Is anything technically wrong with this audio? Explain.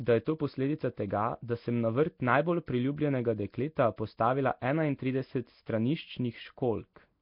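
Yes, the speech carries Nellymoser compression damage from start to finish. It's likely the old Flash Nellymoser Asao codec working hard, at a rate that points to around 22 kbps: blocks coded at a fixed bit budget, starved bands refilled with noise, and nothing above 5.3 kHz. You get a rough, hissy halo and a smeared, underwater feel.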